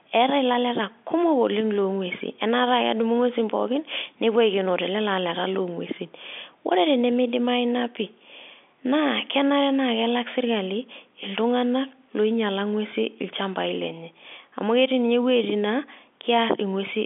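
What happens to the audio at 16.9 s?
Nothing goes wrong at 16.9 s; the speech there carries on intact through the ordinary telephone-band coding, with no dropout, click or distortion at that moment.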